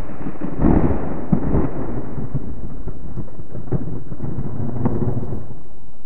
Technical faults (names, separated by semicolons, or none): DC offset